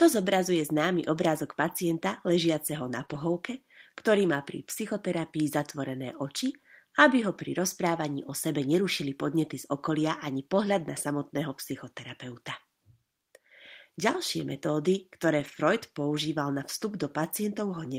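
At 3.05 to 3.10 s there's a short concealed packet loss. About 20 ms of the speech never reached the decoder in time, so it papered over the hole by carrying the last sound forward for 23 ms before easing back into real audio. You hear a quick smear right there.

Straight after, from 3.10 to 3.16 s, comes a lost packet rebuilt from error correction. That's 40 ms played from the low-bitrate backup copies, which fits two 20 ms packets, so there's no gap, just a rougher, noisier patch. The same thing happens again, longer, at 15.40 to 15.58 s, with 100 ms rebuilt, consistent with five separate packets.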